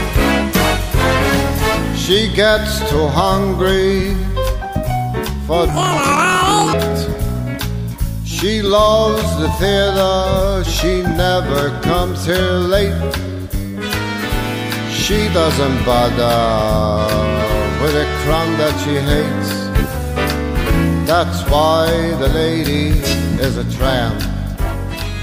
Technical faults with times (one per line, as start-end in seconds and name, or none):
5.69-6.75 planar audio read as interleaved